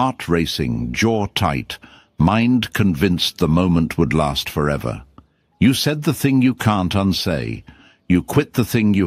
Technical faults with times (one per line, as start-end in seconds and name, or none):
none